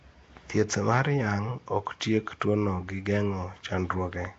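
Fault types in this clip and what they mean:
Nellymoser compression: Grainy hiss clings to the speech throughout, and it sounds smeared, as if underwater. This likely comes from Flash's Nellymoser Asao codec. Its tight bit budget starves weak bands, which are filled with noise. Nothing sounds above 7.8 kHz, which fits roughly 32 kbps.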